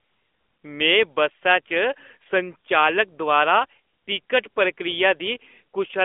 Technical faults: AMR narrowband mobile codec; lost AMR speech frames

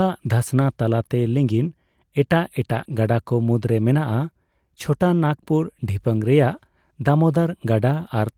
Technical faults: lost packet rebuilt from error correction

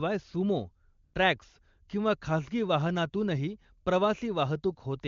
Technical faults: AMR comfort noise

